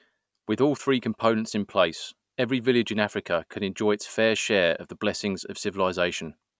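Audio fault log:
No audible faults found in this speech recording.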